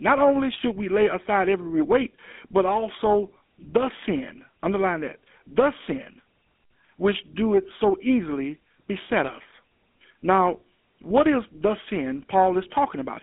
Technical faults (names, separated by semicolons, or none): GSM full-rate codec